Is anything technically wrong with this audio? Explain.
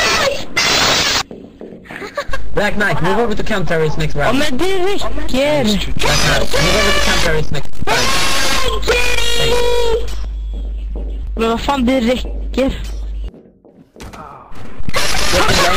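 No, nothing technically wrong stood out on listening.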